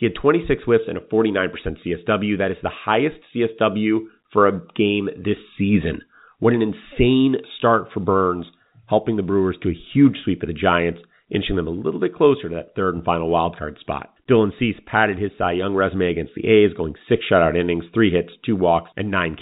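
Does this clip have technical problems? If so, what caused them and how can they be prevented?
No, this clip has no technical problems.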